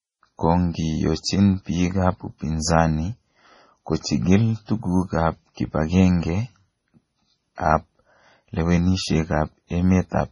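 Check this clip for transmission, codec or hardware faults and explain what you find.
One fault runs through the whole recording. Throughout, the speech sounds watery and swirly, with metallic chirps on s sounds, smeared consonant attacks, and nothing above 10.5 kHz. The cause is likely heavy MP3 compression, consistent with a very low bitrate around 24 kbps, which cuts the treble and drops weak frequency lines that flicker between frames.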